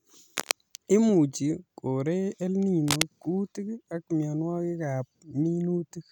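Speech with two short bursts of cable scratch noise, from 0.37 to 0.54 s and 2.88 to 3.03 s, rustling at about the speech's own level, likely from a worn cable or connector being moved. A spectrogram shows dense, broadband vertical smears; the waveform shows jagged, irregular spikes.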